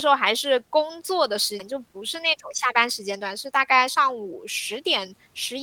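It's a speech clip with two playback faults. At 1.59 to 1.61 s there's a skip ahead: roughly 0.4 s of audio was dropped while later packets were already queued, so playback jumps forward with no gap and the two sides are spliced almost directly. Then from 1.72 to 4.35 s the jitter buffer speeds up to 105%. The buffer was holding more than its target, so it trimmed small pitch-period chunks, about 0.15 s in total. The talk sounds a little hurried but stays at the same pitch.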